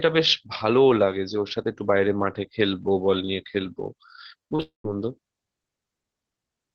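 From 4.38 to 4.62 s, repeated packet loss gives the speech a choppy, robotic sound. Seven short gaps, the longest 32 ms, are each filled by stretching the preceding sound, so about 42% of the span is concealed. A spectrogram shows smeared, repeated slices alternating with intact frames.

From 4.62 to 4.85 s the audio cuts out, likely a long network dropout. About 220 ms never arrives. The last sound drags on as a fading buzz, then roughly 130 ms of silence follows. The waveform shows a decaying tail, then a flat gap before speech resumes.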